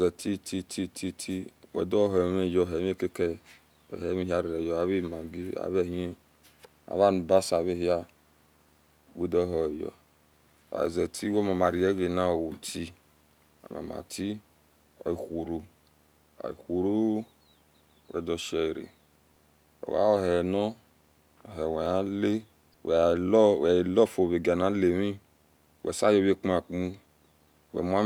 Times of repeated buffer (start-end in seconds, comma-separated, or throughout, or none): none